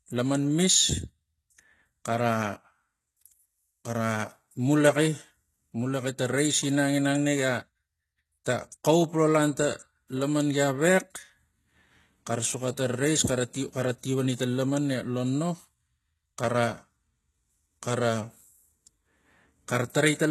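HE-AAC compression, heavy, runs through the whole speech clip: nothing is present above 12.3 kHz, and the treble sounds rebuilt rather than real, with gritty, lispy s sounds. This likely comes from spectral band replication, copying lower bands upward, consistent with a very low bitrate around 16 kbps.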